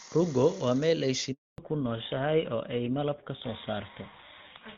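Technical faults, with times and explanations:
1.32–1.58 s: handover gap, just after "waa meel ay". The sound drops out for 260 ms while the call switches networks and no speech frames arrive.
1.58 s to end: fallback to narrowband. The clear HD Voice sound gives way to duller, rougher audio with nothing above 4 kHz, which fits an older narrowband codec such as GSM full rate.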